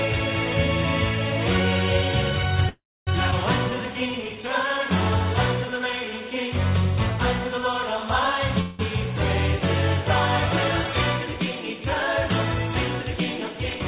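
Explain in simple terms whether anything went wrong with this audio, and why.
At 2.69 to 3.09 s the sound stalls: a brief buzzy continuation fades into about 0.27 s of silence, then resumes where it stopped. This is a call audio freeze, likely because packets arrived late and the receiver's jitter buffer ran dry, so 0.38 s of gap was inserted. At 8.61 to 8.81 s it happens again for 0.18 s, this time as a fading buzz with no silence.

At 3.31 to 3.34 s the audio jumps forward with almost no gap. This is a skip ahead: about 0.15 s was dropped, and the parts on either side are joined nearly directly.

From 3.70 to 4.43 s and again from 5.66 to 6.11 s the sound drags, playing at 89% speed without dropping in pitch. This jitter buffer slow-down happens when the receiver repeats tiny slices of the sound to rebuild its reserve, adding 0.09 s and 0.06 s.

From 13.02 to 13.80 s the audio feels slightly rushed, running at 106% speed. 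This jitter buffer speed-up comes from the receiver trimming about a twentieth of a second in small pieces to reduce built-up delay. Throughout, the sound is narrow, with nothing above 4 kHz, which fits the phone-style call codec used.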